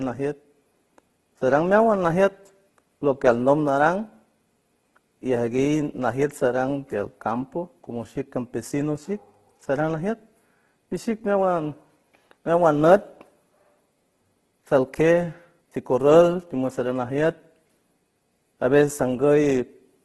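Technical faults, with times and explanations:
Throughout, Opus compression: the speech sounds rough, grainy and noisy, with a gritty texture in place of clean tone, and nothing reaches above 12.3 kHz. This is likely a heavily squeezed Opus encode in its music (CELT) mode, which fits a bitrate around 12 kbps. Short of bits, the encoder keeps each band's overall energy but fills in the detail with folded copies of lower bands or with noise, so the tone turns grainy rather than swirling.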